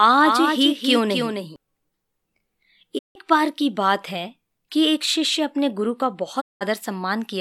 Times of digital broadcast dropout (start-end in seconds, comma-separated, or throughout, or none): 2.97-3.17, 6.39-6.63